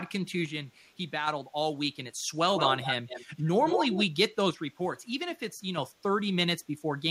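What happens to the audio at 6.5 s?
Nothing goes wrong at 6.5 s: the speech plays through that moment intact, with no dropout, click or distortion.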